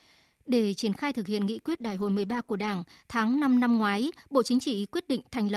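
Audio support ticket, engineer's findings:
Call bitrate drop, 1.66–2.81 s, right after "khai thực hiện nghị". Speech turns coarse and muffled, highs cut, for about 1.1 s. Fits the encoder being throttled from roughly 64 to 13 kbps after a bandwidth estimate dip, then recovering.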